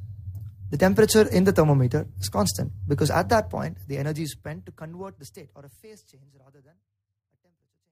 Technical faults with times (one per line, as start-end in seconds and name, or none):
none